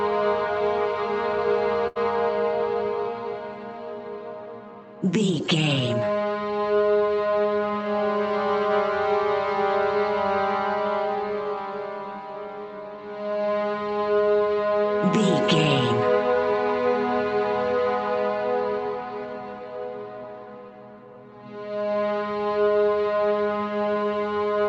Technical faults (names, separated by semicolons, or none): burst of packet loss